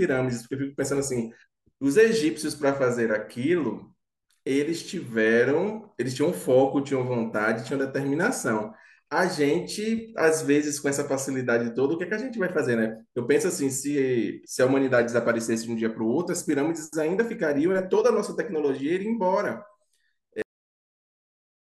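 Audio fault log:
20.42 to 21.66 s, cut-off end: the final buffers of the stream were never written or played out, so playback halts partway through the speech at 20.42 s and falls straight to digital silence, with no natural decay or tail, until the clip ends.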